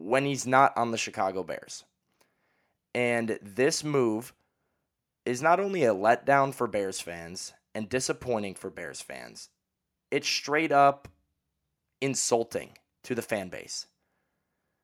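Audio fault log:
No audible faults detected.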